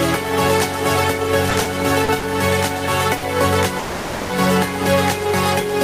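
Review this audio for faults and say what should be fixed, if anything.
Packets kept reaching the receiver late in a burst between 1.50 and 1.66 s, so the jitter buffer ran dry four times in quick succession. This is repeated stalls (stutter). Each gap was short, the longest about 10 ms, and the receiver patched each one by continuing the sound it already had. In total 40 ms was filled, a quarter of that span. Nothing is lost, but the passage jerks and drags as it restarts over and over.

Three single packets arrived late, at 2.04–2.09 s, 2.19–2.24 s and 3.17–3.23 s, and each time the buffer had nothing ready to play. These are short stalls from a late packet. The delay jumped by 40 ms at the first two and 50 ms at the third. The receiver held the last sound for that long and then resumed exactly where it had stopped. Each one is heard as a sound lingering slightly too long, with a faint buzz or dip, and nothing is skipped.

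From 3.79 to 4.30 s the sound stops moving forward for about half a second. The receiver fills those 500 ms by extending what it last played, so there is a smeared hold that buzzes or hisses and fades, rather than silence. The audio then carries on from the same point, and nothing is dropped. This is a call audio freeze, likely caused by a batch of packets being held up in the network, which let the buffer drain completely.

To prevent this, use an adaptive jitter buffer with enough headroom to absorb delay swings of around 50 ms, and fix the network path causing the longer hold-ups.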